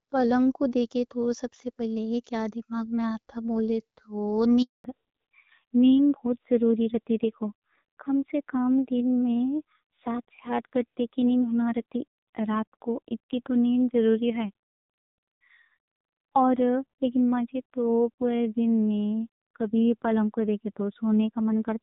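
At 4.62 s there's a handover gap. The call hops networks and the speech just drops out for about 220 ms, until 4.84 s, so whatever was said there is gone. Right after, from 4.84 s to the end, there's a fallback to narrowband. Everything above 4 kHz disappears and the speech goes duller and rougher, which fits a low-rate narrowband codec taking over.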